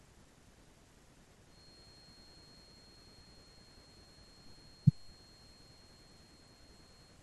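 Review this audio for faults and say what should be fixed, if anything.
A feedback whistle sits under the speech from 1.45 s to 7.23 s. It is a thin 4.3 kHz tone about 20 dB down, likely from a loudspeaker-to-microphone loop held just short of runaway feedback. A spectrogram shows a steady horizontal line at 4.3 kHz. Lowering monitor gain or separating microphone and loudspeaker prevents it.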